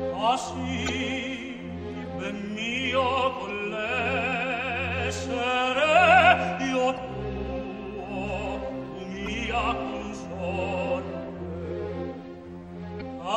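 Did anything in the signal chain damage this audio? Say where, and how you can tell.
Yes. A steady watery swirl runs throughout, likely MP3 compression at the codec stage, fitting about 64 kbps. The swirl sets it apart from a plain low-pass filter.

Damaged data in a compressed stream, from storage or network, causes brief glitches of about 40 ms at 0.85, 3.46, 6.94, 9.24 and 12.97 s, where the decoder loses frame sync.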